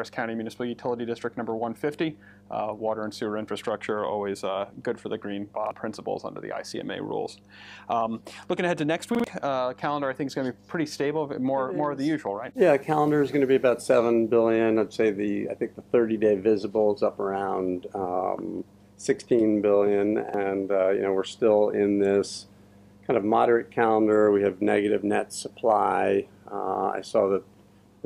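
A steady low tone at 50 Hz runs under the whole recording, sitting around 30 dB below the main signal. This mains hum comes from the power line leaking into the signal path, most often through a ground loop or a nearby transformer.

At 5.67 s, 9.15 s and 20.29 s the sound catches in a brief stutter, with the same 46 ms fragment heard twice, then three times at 9.15 s, then twice again, each with a hard join. This repeated buffer fault happens when fresh audio arrives late and the device replays its last block, a length that fits a 2048-sample buffer.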